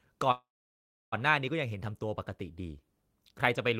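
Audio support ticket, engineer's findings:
Call audio freeze, 0.31–1.14 s: sound stretches into a fading buzz, then about 0.67 s of silence; resumes where it stopped, nothing lost, 0.81 s later. Likely jitter buffer underrun from delayed packets.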